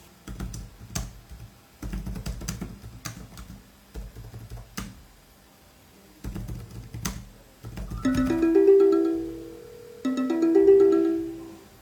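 At 8.13 s a doubled audio track appears abruptly and runs to the end: a second, full-band copy trails roughly 150 ms behind, around 5 dB quieter, with no decay or room colour. It is likely a second capture path or misaligned edit.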